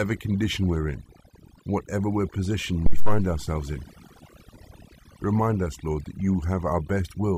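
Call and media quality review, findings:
Near-silent background with twinkling specks throughout. Overdone noise removal: noise suppressor set too aggressive, cutting individual frequency bands down or off whenever they sit near its noise estimate, taking quieter speech components with them.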